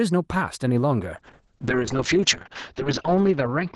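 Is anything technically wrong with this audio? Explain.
Yes. From 1.16 s to the end of the clip there is a call bitrate drop. The encoder's available bitrate collapses, consistent with a fall from about 32 kbps to about 6 kbps, and holds at its lowest for about 1.6 s. Opus responds by quantising more coarsely and narrowing the coded band, with the cut-off dropping from 12 kHz to 8 kHz. The speech turns rough and watery, with duller highs.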